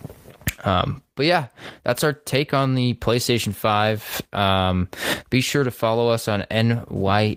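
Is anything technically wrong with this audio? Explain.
No, this speech recording shows no technical faults.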